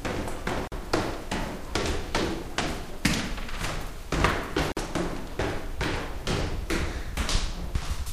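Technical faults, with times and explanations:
0.68 to 0.72 s and 4.72 to 4.77 s, gap at a join of encoded pieces: a gap of 44 ms and then 49 ms opens in the sound, with smeared edges, and the sound resumes exactly where it left off. The gaps recur every 4 s, which points to pieces encoded separately and butted together untrimmed, so each join keeps the encoder's start-up delay and the padding of the previous piece's last frame.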